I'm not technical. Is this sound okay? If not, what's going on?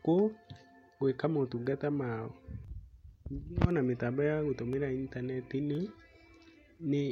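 No. Periodic USB or driver dropouts cause ticks about once a second, from 0.63 to 6.77 s, where sub-millisecond slivers of speech drop to silence.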